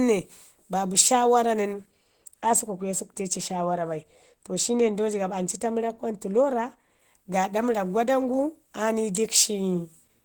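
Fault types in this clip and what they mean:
Opus compression: the speech sounds hoarse and muffled throughout, likely from Opus at a low 16 kbps running in its hybrid speech mode.
De-emphasis applied wrongly: from 1.73 to 6.99 s a stray treble cut dulls things, sloping down smoothly to about 8 dB lower at 10 kHz.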